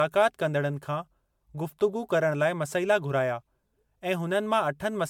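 Generation loss runs through the whole of this speech clip, which sounds swirly, hollow and smeared, with blurred consonant attacks and nothing above 19.9 kHz. The likely cause is repeated MP3 encoding, around seven passes at a rate that fits 128 kbit/s, each requantising on a shifted frame grid so noise and spectral holes pile up.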